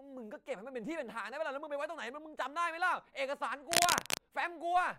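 Speech with cable scratch noise from 3.72 to 4.18 s: dense, ragged rustling about 5 dB louder than the voice, likely a worn cable or connector being moved, showing as broadband irregular spikes on the spectrogram.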